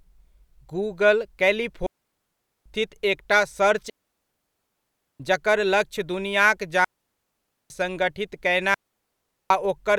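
Clean holes of near silence cut the speech at 1.86 to 2.66 s, 3.90 to 5.20 s (after "एकटा सर्च", resuming at "जकर लक्ष्य दुनियाक"), 6.85 to 7.70 s (after "जकर लक्ष्य दुनियाक") and 8.74 to 9.50 s, with no noise bursts around them. These are digital wireless dropouts: the receiver lost too much data and muted with a very short fade.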